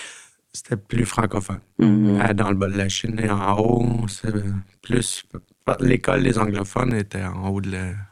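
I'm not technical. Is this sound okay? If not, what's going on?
No. From 0.92 s to 6.92 s the speech carries overlap-add ripple: it was split into short overlapping pieces and rejoined unevenly, so the loudness pulses deeply about a hundred times a second, giving a metallic buzz.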